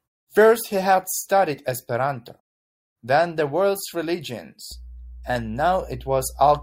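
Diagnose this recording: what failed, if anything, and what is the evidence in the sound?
Mains hum appears in the analogue wiring stage. From 4.72 s to the end of the clip, a steady low tone at 60 Hz sits under the speech, roughly 20 dB below it. It never changes pitch or level. A ground loop or a nearby transformer is coupling the power line into the signal path.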